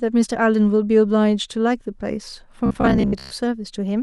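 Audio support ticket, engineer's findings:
Robotic sound from repeated short buffers, 2.66–3.32 s. New audio likely arriving too seldom, so the playback path loops the last chunk of about 15 ms to fill gaps while real audio is skipped. Roughly half the sound in that span is repeats. Loop rate imposes a fixed 66.8 Hz buzz; speech turns rigid and metallic, tracking the words only loosely.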